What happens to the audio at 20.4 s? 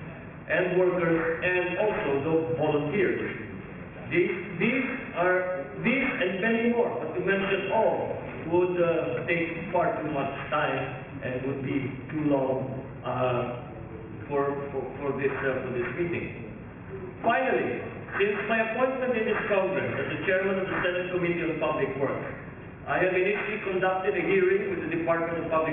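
Aliasing is present at 20.4 s, as it is for the whole clip. The audio was resampled to a much lower rate without first removing content above half that rate, so everything above 3 kHz folds back below it onto false, unrelated frequencies. The result is a gritty, metallic edge on bright sounds, with the spectrum pressing right up to a 3 kHz ceiling, which fits a 6 kHz rate. The folded energy sits roughly 15 dB below the signal.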